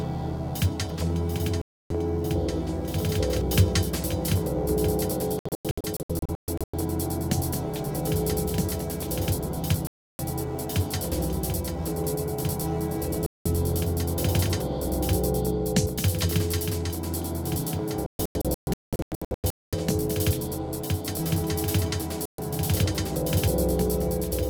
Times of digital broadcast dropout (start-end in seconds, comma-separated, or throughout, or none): 1.61-1.91, 5.39-6.74, 9.87-10.19, 13.26-13.46, 18.06-19.73, 22.25-22.39